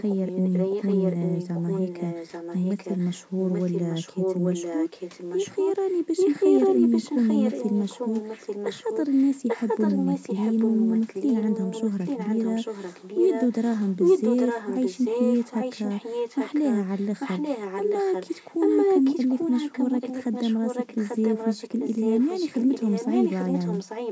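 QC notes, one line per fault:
0.0–3.28 s and 3.48–24.12 s, echo leak: the far end's echo canceller likely let loudspeaker pickup through, so the speech returns 840 ms late, about 5 dB quieter than the original.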